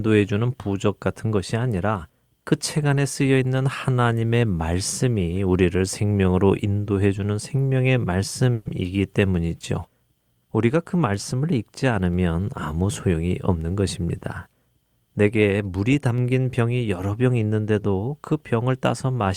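At 8.53 s the speech halts for roughly 120 ms, ending at 8.67 s, in a call audio freeze. The receiver stretched the last sound into a short fading buzz or hiss rather than dropping to silence, which is likely because delayed packets left the jitter buffer empty. When the stream resumes, it picks up exactly where it stopped. Nothing is lost, but the playout now runs about 120 ms later than before.

From 12.73 to 13.71 s there is a jitter buffer speed-up. The receiver held more audio than its target, so it trimmed out short slices of one or a few pitch periods repeatedly, about a tenth of a second in total. Playback runs at about 111% speed while the pitch stays unchanged, so this stretch of speech sounds hurried before the normal pace returns.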